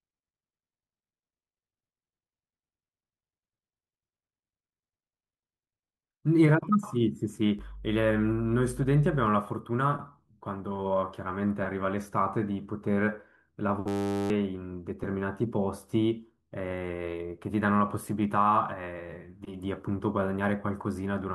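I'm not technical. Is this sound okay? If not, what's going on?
No. From 7.59 to 9.27 s there is mains hum: electrical power leaking into the recording as a steady, low 50 Hz drone underneath the speech. Unlike a glitch, the speech carries on normally; the hum just sits beneath it, clearly audible.

From 13.88 to 14.30 s there is a system hang loop: the computer briefly froze and the sound hardware kept repeating the same tiny 10 ms slice, dozens of times. That makes a harsh 100 Hz buzz that replaces nearly half a second of speech, rather than sitting under it like the hum.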